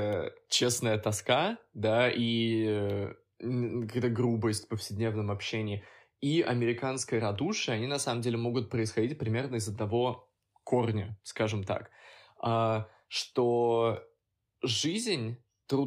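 A speech recording with no technical fault to point to. Nothing in it calls for a time or a cause to be given.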